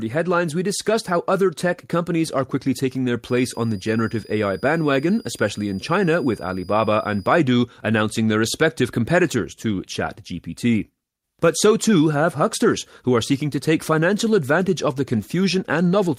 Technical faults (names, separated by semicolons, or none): switching supply whistle